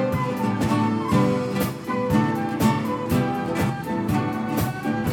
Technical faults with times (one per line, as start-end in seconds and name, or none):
none